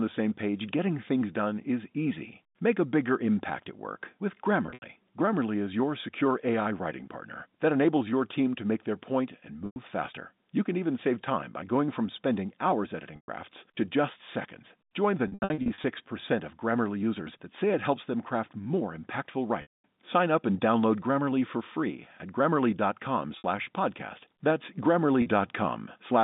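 Packet loss with pitch repetition breaks the speech at 4.66 s after "impact at work with", 9.66 s after "make their point and", 13.16 s before "to just seconds", 15.28 s, 19.62 s, 23.38 s and 25.22 s. The receiver repeats the last pitch period, so short gaps buzz. The longer 15.28 s and 19.62 s gaps fade towards silence.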